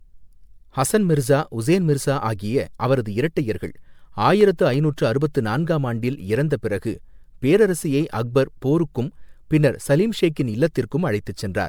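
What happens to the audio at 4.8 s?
A short run of ticks, four tiny clicks or micro-dropouts, falls between 4.41 and 4.91 s, just before "அறுபத்து நான்காம் ஆண்டில் இறந்த". These are CD scratch ticks: a scratch defeats the disc's error correction once per rotation, and the player patches or mutes the bad samples each time, the longest gap lasting about a millisecond.

Underneath, the speech sounds swirly, hollow and smeared, with softened consonant attacks. This is likely generation loss from repeated MP3 re-encoding at 128 kbit/s, perhaps seven passes, each adding fresh quantisation noise and spectral holes.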